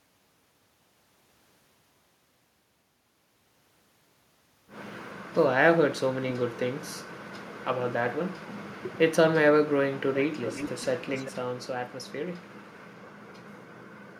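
From 10.45 to 10.86 s and again from 11.14 to 11.32 s there's an echo leak, a quieter copy of the speech trailing 383 ms behind, likely from a speakerphone whose echo canceller missed it.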